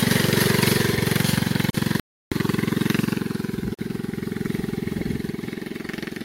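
At 1.70 s a brief silence of about 42 ms cuts into the continuous sound. Its edges are smeared, and the audio picks up exactly where it stopped. This is a gap at a join of encoded pieces: segments encoded separately and joined every 2 s each keep their encoder start delay and the padding on their last frame. From 2.00 to 2.32 s the sound halts mid-flow for about 318 ms before going on. This is a playback stall, likely caused by the player running short of data or having its thread blocked. At 3.74 s the join gap returns, 43 ms long, two seconds after the first.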